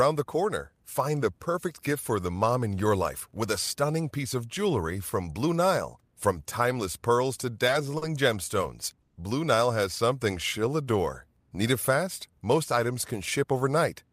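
At 7.98 s, just after "timeless pearls to", the speech holds on its last sound for about 40 ms with a faint buzzy dip before carrying on intact. This is a short stall from a late packet: the jitter buffer ran dry and the receiver stretched the previous audio until the packet arrived.

From 9.02 to 9.18 s the speech freezes into a fading buzz for about 140 ms without going silent, then resumes where it stopped with nothing lost. This call audio freeze is likely the jitter buffer emptying while packets were held up in transit, with the receiver extending the last sound until they came.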